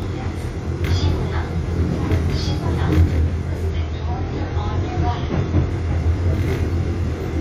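The sound carries channel delay (comb filtering) throughout: one side trails the other by about 20 ms, so the mono sum sounds rough or slightly doubled, with evenly spaced notches starting near 20 Hz. From 3.7 to 5.7 s, the adaptive stream drops to a lower bitrate. The top end cuts off abruptly above 6.9 kHz with no gap, which fits a switch from roughly 96 to 24 kbit/s AAC.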